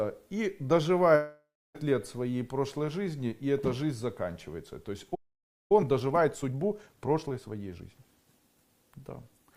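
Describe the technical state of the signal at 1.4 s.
At 1.4 s, a fading buzz fills a 1.15–1.77 s gap, likely a long network dropout that lost about 0.6 s of audio.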